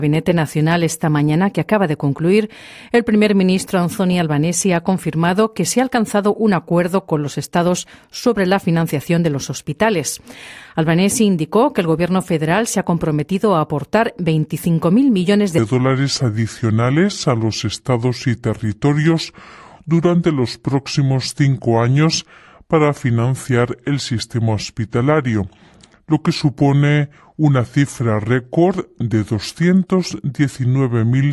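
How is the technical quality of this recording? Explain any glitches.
From 15.58 s to the end, the sound abruptly drops into a slower, deeper register, running at 0.726 times its proper speed and about 5.5 semitones lower in pitch, with timing and pitch sagging together. This is a wrong sample rate fault: the samples are clocked out more slowly than they were captured, without any rate conversion. The ratio fits audio recorded at 44.1 kHz being played back at 32 kHz.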